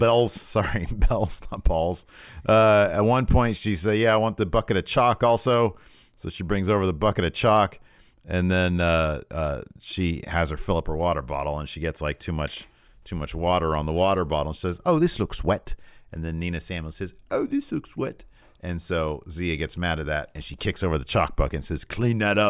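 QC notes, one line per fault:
No fault is heard anywhere in this speech clip. Nothing needs logging at any point in the recording.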